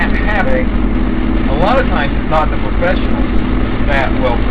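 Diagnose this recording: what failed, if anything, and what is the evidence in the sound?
A brief glitch at 0.44 s, lasting about 14 milliseconds, is the evidence of damaged data in a compressed stream at the codec stage. Corrupted bytes in the encoded file made the decoder misread a frame and lose sync until it found the next valid frame header.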